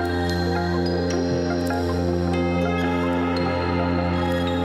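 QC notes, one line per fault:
throughout — audio read two samples at a time (double speed): everything plays at 2x speed and a full octave (12 semitones) high. The data was read two samples per frame, so it runs at double rate and upper frequencies fold back as aliasing.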